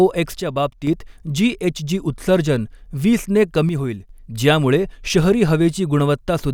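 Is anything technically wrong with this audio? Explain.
Yes. The speech suddenly drops in level by about 6 dB from 0.40 to 0.87 s and again from 3.69 to 4.09 s, then returns. This is likely one channel drops out: one stereo side goes silent, so the mono sum loses half its shared signal.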